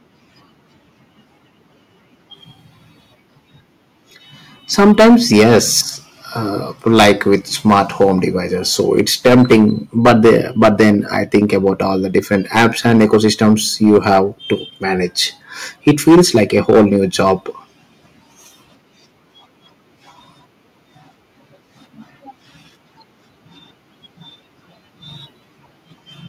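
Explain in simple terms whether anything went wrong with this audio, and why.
Something went wrong: hard clipping. The speech got louder than the recording could hold, so the loudest moments were chopped flat. That adds a harsh, crackly fuzz. It happens at 4.79–5.8, 6.87–8.25, 8.8–9.7, 10.05–11.7, 12.16–14.53 and 15.87–17.32 seconds.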